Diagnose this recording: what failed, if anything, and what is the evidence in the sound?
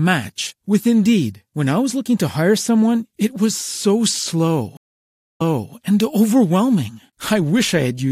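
Stream reconnect, 4.77 to 5.74 s, a network fault: after "it was so slow" the speech drops out for 0.58 s, then a fresh decoder resumes 0.39 s earlier, replaying speech.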